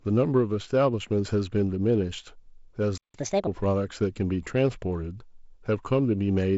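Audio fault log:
2.98–3.14 s, playback stall: the sound cuts to silence for about 160 ms, then resumes exactly where it left off, with nothing skipped. That distinguishes it from a packet-loss gap, which drops material. The likely cause is the player running out of buffered data.
3.14–3.47 s, catch-up at higher speed: right after the silence the audio runs at 1.5 times normal speed, pitched about seven semitones higher, while the player works off its backlog. It then settles back to normal. A sample-rate mismatch would shift the pitch of the whole clip, not just this short stretch after the stall.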